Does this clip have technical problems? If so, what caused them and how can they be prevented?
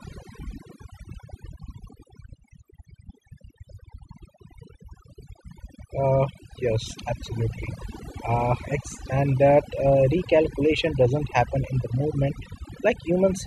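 Yes. Throughout, the speech sits over near-silent, twinkling gaps: overdone noise removal, where bands near the noise estimate were cut, taking quiet speech detail with them. Prevent it by applying gentler reduction settings and checking the result by ear.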